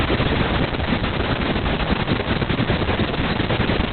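A faint, steady ticking runs under the speech for the whole clip, about ten ticks a second and well below the voice in level. This is Wi-Fi interference: a nearby radio's beacon, repeating every 102.4 ms, is being rectified by the audio circuit and heard as clicks. The speech itself sounds muffled, hoarse and slightly robotic, with nothing above about 4.3 kHz. That is heavy Opus voice compression: the narrowband SILK coder has cut the bandwidth and coded the excitation coarsely, which fits a very low bitrate of around 6 kbps with long frames.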